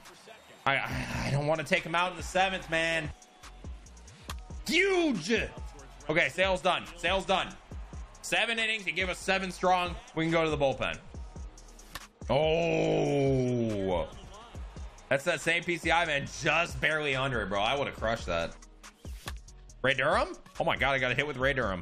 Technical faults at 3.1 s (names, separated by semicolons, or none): compressed frames skipped